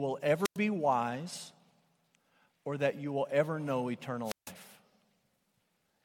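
Speech with two wireless microphone squelch dropouts, at 0.44–0.57 s and 4.24–4.52 s right after "you will ever know": the RF fades, hiss rises, then the receiver mutes for about 100 ms and 154 ms.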